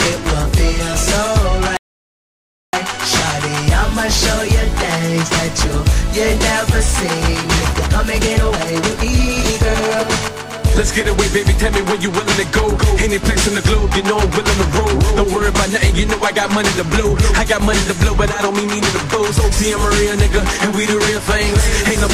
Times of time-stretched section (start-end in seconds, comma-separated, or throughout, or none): 7.72-10.04